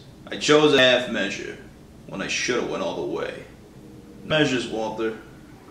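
At 0.78 s and again at 4.30 s there is a brief blip, each lasting only a few milliseconds, caused by damaged data in a compressed stream. At those points some bytes of the encoded audio are wrong, so the decoder misreads the affected frame, loses its place in the bitstream and has to find the next valid frame header before clean output resumes. The result is a tiny glitch.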